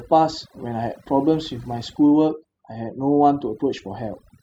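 From start to finish, the speech carries overdone noise removal. A noise reduction process was pushed too hard on a noisy recording. Any frequency band close to its noise estimate gets pulled far down or shut off entirely. Softer parts of the voice fall below that line and vanish with the noise. Between phrases the background drops to near silence, dotted with twinkling specks.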